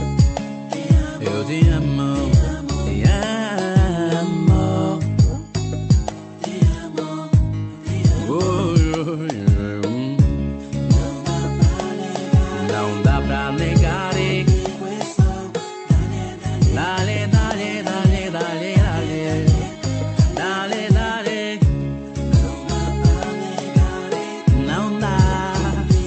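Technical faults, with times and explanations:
Nothing stood out on listening to this audio, which comes through an ordinary call connection.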